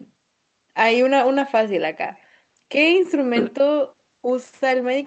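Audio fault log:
No faults are present in this speech, which has passed through a WebRTC call path using the Opus codec at 32 kbps with an 8 kHz audio bandwidth, so its coding noise and upper frequency limit are what that codec setting produces.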